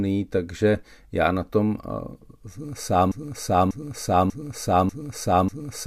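A speech clip that falls into a broken-record loop at 3.12 s: a 0.59 s fragment repeats exactly, back to back, five times through the end. Unlike echo, nothing decays or overlaps. Identical copies replace the missing audio, likely from a stalled player or stream.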